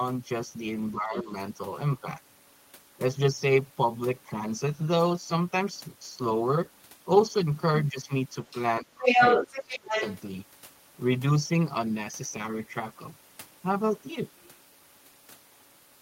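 From 0.94 to 1.31 s, the speech is suppressed in double talk. It dips by about 10 dB. The likely cause is an echo canceller ducking both voices at once. From 1.12 to 1.22 s, the other side's voice leaks through faintly, about 15 dB under the speech. This is likely residual loudspeaker echo. From 8.51 to 8.58 s, another brief scrap leaks in, about 20 dB down. From 8.81 to 8.92 s, the speech drops by about 20 dB. From 8.98 to 10.17 s, the leaked voice becomes loud, about 5 dB above the speech. From 9.5 to 10.05 s, the talker is cut by about 25 dB underneath it.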